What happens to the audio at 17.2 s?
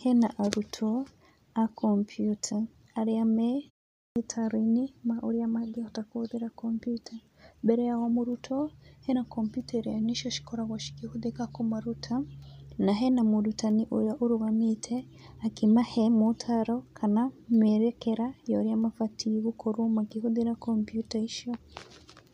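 Nothing goes wrong at 17.2 s: the speech plays through intact at that moment.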